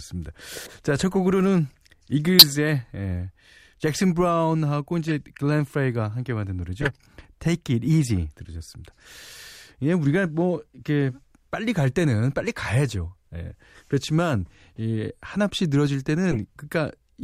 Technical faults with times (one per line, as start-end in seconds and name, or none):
0.65-0.73 corrupt frame decoded
2.39-2.46 corrupt frame decoded
5.08-5.12 corrupt frame decoded
6.81-6.89 corrupt frame decoded
16.31-16.39 corrupt frame decoded